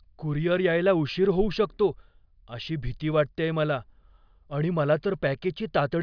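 No technical faults are audible anywhere in the recording. Nothing in the audio points to a problem in how it was captured, processed or delivered.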